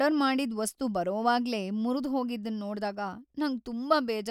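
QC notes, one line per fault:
No faults detected.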